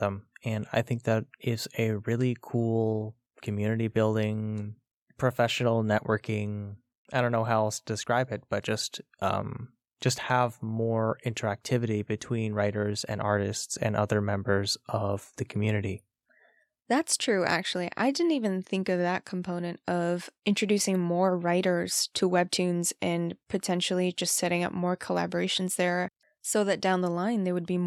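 Nothing in this stretch of speech comes across as a technical fault, so there's nothing here to point out.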